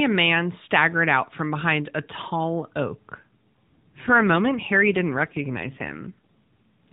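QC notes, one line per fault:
3.35–6.63 s, AMR rate drop: Just after "behind a tall oak", the AMR-NB link steps its speech coding down to a lower rate and spends the freed bits on error protection. The change in texture fits a move from the 12.2 kbps mode, which carries only light codec damage before this point, to 5.9 kbps. With fewer pulses describing each 5 ms of excitation, the voice turns rougher and more synthetic. There is no gap and no change of band.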